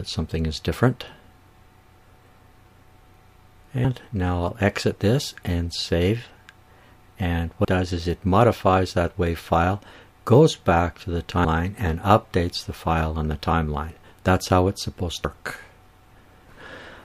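Abrupt skips at 7.65, 11.45 and 15.25 s each drop about a fifth of a second of sound, likely audio missing between chunks of about 4 s.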